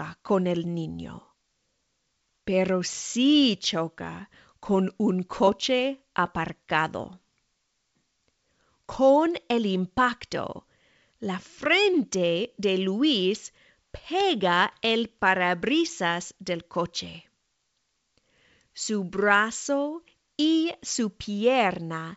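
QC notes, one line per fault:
No faults are heard in the speech. It carries the sound of G.722 wideband telephone coding at 64 kbit/s, with the audible band reaching up to about 7 kHz.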